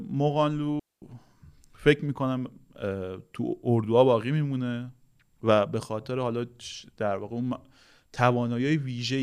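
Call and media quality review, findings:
Digital wireless dropout, 0.80–1.02 s. RF link lost too much data; receiver muted with a very short fade rather than passing corrupted audio. Result: clean 224 ms hole of near silence in the speech, no noise burst either side.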